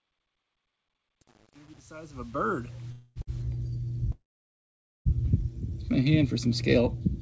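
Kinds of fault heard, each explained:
Truncation distortion on a fade: from 0.0 to 3.42 s, worst up to 2.88 s, the fade-in's quiet start sounds gritty. The fade stage kept too few bits without dither, which fits about 9 bits, so low levels become coarse square steps.
Call audio freeze: at 2.92 to 3.18 s the sound is held as a decaying buzz or hiss for 238 ms, about 30 ms of it silent; at 4.12 to 5.07 s, 933 ms, mostly silence for 870 ms. Delayed packets likely emptied the jitter buffer, inserting gaps with nothing lost.
Short stall from a late packet: at 3.22 to 3.29 s the receiver stretched the last sound for 55 ms while a packet was overdue, then resumed from the same point. The sound is briefly held too long, with nothing missing, adding 55 ms of delay.
Jitter buffer slow-down: from 5.70 to 6.10 s the audio runs at 92% speed at unchanged pitch, adding 38 ms, as the receiver repeated single pitch periods or pause fragments to rebuild its reserve, giving drawn-out sounds through the G.722 call path.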